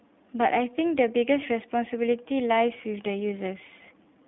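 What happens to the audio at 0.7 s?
At 0.7 s the speech sounds thin, slightly rough and synthetic, with nothing above about 3.8 kHz. This is the iLBC codec, present throughout the clip. It codes each 20 ms frame independently within a narrow 150 Hz to 3.6 kHz band, likely at its 15.2 kbps mode.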